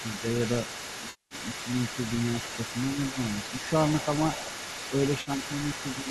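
From the start to the end, a second voice sits underneath the main speech at roughly 10 dB below it. This is the other side's voice leaking through. It is likely that the far end played on a loudspeaker and the echo canceller did not remove it from the microphone. The leak runs for the whole clip. It is quiet but never fully gone.

At 1.10 s comes an AAC frame loss with concealment, lasting until 1.35 s. About 210 ms of audio is missing. The decoder rebuilt the gap from the last good spectrum, so the speech turns smeared and noisy rather than dropping cleanly to silence. The span fits a run of short low-delay frames, about 10 ms each.

At 3.10 s the main speech dips for about 70 ms, ending at 3.18 s. This is speech suppressed in double talk. The level falls by around 10 dB at its deepest point. Both sides were likely talking at once, and the echo canceller turned down the wanted voice along with the echo.

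At 5.21 s a second AAC frame loss with concealment runs to 5.30 s. It covers about 50 ms, short enough to sound like a brief phasey blur.

At 6.03 s another double-talk suppression pulls the speech down by about 5 dB for roughly 40 ms, ending at 6.07 s. It is milder than the first.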